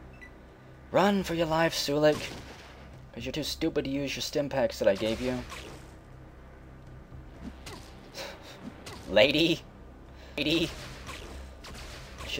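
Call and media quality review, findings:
Doubled audio track, 10.38 s to end of clip. Full-band second copy enters abruptly, trailing by roughly one second at about equal level, with no decay or room colour. Likely cause: a second, slower capture path mixed in, or an edit holding two out-of-step copies.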